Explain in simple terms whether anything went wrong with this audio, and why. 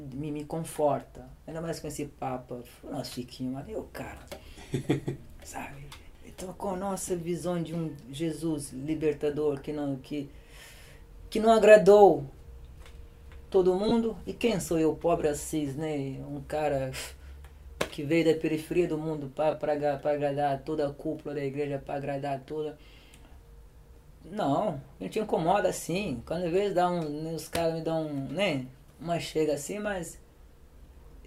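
Three tiny blips break into the sound: a brief hazy smear at 13.89 to 13.92 seconds, a shorter one at 19.51 seconds, and the shortest one at 22.49 seconds. These are lost LE Audio frames. Small chunks of the wireless Bluetooth stream never arrived, so the receiving decoder filled each gap by reusing the last bit of sound with its detail scrambled. The gaps last about 22, 15 and 8 milliseconds, which fits roughly three, two and one short frames going missing. The light lossy compression from the codec is working as designed.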